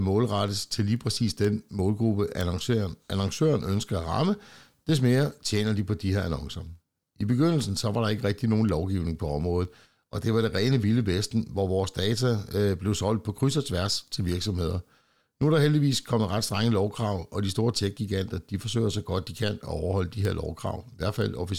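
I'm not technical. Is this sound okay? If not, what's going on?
No. Two pieces of digital equipment were passing this speech between them while each kept its own timing, and their clocks were not locked together. They drift apart very slightly, and every time they slip past each other one sample gets lost or doubled. This fault is called word clock ticks. You hear it as sharp clicks about twice a second, around forty of them, running from 0.48 s to 21.2 s.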